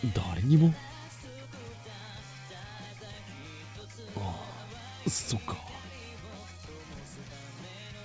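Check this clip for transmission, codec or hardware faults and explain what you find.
Nothing wrong turns up in the signal, which reaches the listener through a WebRTC call path whose wideband coding, consistent with G.722, leaves no content above 8 kHz, the normal ceiling for that codec.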